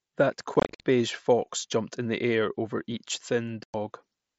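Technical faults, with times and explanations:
0.54–0.80 s and 3.63–3.74 s, unconcealed Bluetooth headset packet loss: packets on the mSBC link were dropped without concealment, leaving about 170 ms of scattered silent gaps, the longest 52.5 ms, then a 105 ms gap. The abrupt edges make the sound chopped.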